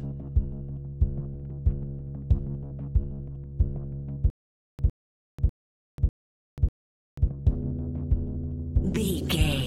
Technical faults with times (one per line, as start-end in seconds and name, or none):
4.30-7.28 stutter with silent gaps